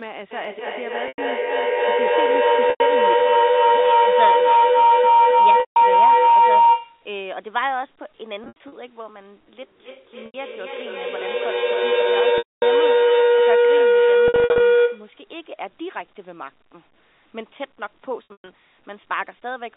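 From 0.31 to 7.09 s a feedback howl builds: sound loops from loudspeaker back into microphone, gaining each trip until a tone near 1 kHz peaks about 14 dB above the speech, with a loop delay of roughly 0.3 s. A spectrogram shows a thickening horizontal line. Within it, packet loss with pitch repetition strikes at 1.08, 2.7 and 5.6 s, lasting 100 to 160 ms. The receiver repeats the last pitch cycle, giving a brief buzzy hold. On the waveform this looks like identical repeating cycles that taper off. A scattered loss follows at 8.44 s. A second howl runs from 9.61 to 15.22 s, lower at around 500 Hz and about 13 dB above the speech, with further losses at 10.26, 12.38 and 14.28 s. The 12.38 s gap lasts 240 ms, long enough to fade toward silence. A final loss comes at 18.25 s. Throughout, the narrow 250 Hz to 3.7 kHz telephone band of the G.711 line is visible as a clear upper cutoff.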